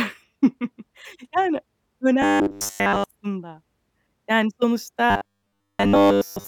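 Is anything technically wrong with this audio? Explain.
Yes. Robotic sound from repeated short buffers occurs from 2.22 to 3.04 s and from 5.10 to 6.47 s. Incoming audio likely arrived too seldom, so a 10 ms stretch was replayed almost continuously in place of the real signal. The speech becomes a rigid, metallic buzz fixed at 100 Hz.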